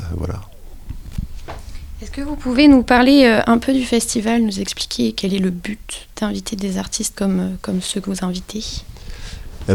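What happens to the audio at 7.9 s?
At 7.83 to 7.94 s a burst of loose connector crackle breaks through: a worn contact repeatedly making and losing connection chops the signal, giving irregular scratchy clicks. On a waveform it shows as jagged dropouts and spikes; a spectrogram shows scattered broadband vertical streaks.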